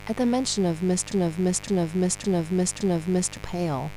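Switching spikes from a dimmer, rectifier or unshielded cable leak into the signal path throughout, twice per 50 Hz cycle, stacking harmonics up into the kilohertz range. The result is a steady, raspy mains buzz sitting only about 15 dB below the speech for the whole clip.

From 1.12 s to 3.37 s, the player or stream likely stalled and kept resending the last fragment it held, a 0.56 s piece of speech. That broken-record loop plays four times back to back, identical each pass, and the speech that belonged in that stretch is lost.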